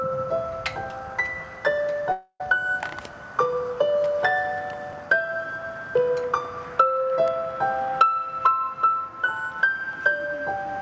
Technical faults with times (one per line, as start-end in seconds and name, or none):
2.12-2.42 long network dropout